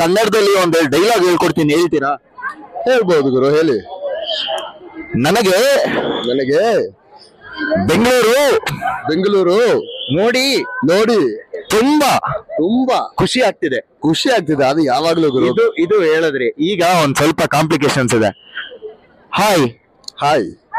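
No technical faults can be heard anywhere in this audio.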